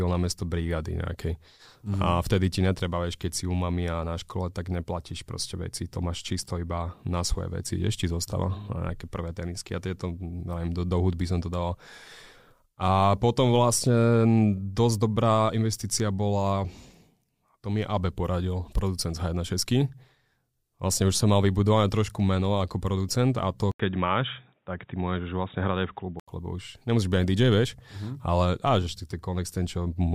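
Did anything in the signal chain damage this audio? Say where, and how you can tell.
Yes. From 23.72 to 26.28 s the speech turns dull and boxy, with nothing above 3.8 kHz, a noise floor about 50 dB below the speech, barely any level change, and an 80 ms silence at the switch. This likely comes from the input switched to a poorer device at the driver stage, before the original microphone returns.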